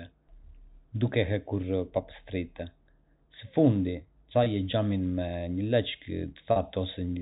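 A telephone-band speech clip at G.711 quality has two gaps from packet loss with pitch repetition, at 4.44 to 4.46 s and 6.52 to 6.56 s. The receiver repeated the last pitch period, giving a brief held, buzzy tone.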